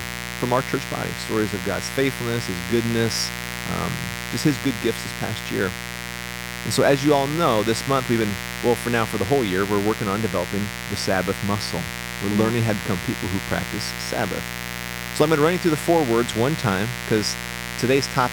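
Sharp switching spikes from a 60 Hz mains supply leak into the signal path for the entire clip, arriving twice per cycle with harmonics reaching several kilohertz. The result is a steady, raspy mains buzz sitting about 10 dB below the speech level.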